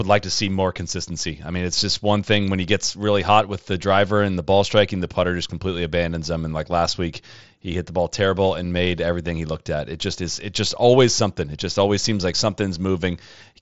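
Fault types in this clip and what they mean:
The speech passes through an mSBC Bluetooth headset link at around 61 kbps, with its band ending near 7.7 kHz and only the light graininess that codec leaves on louder sounds, and no faults are present.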